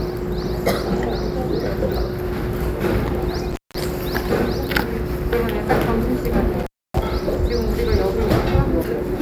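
At 3.51 to 3.75 s and again at 6.60 to 7.01 s, the sound drops out for about 187 ms and then 279 ms, with crackle at each edge and faint hiss in the gaps. This is intermittent contact: a loose cable or plug briefly breaking the signal path.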